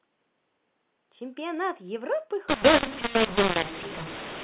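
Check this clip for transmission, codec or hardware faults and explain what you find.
One fault: from 2.49 s until the end, the speech turns harsh and gritty, with levels jumping unevenly and the gaps between words filling with noise instead of falling silent. This is mu-law and A-law mixed up. The telephone-band G.711 stream, mu-law coded at 8 kHz and clean up to that point, is decoded from there as A-law. Each 8-bit code is mapped onto the wrong logarithmic curve, so some amplitudes swell, others shrink, and near-silent samples are pushed well above zero.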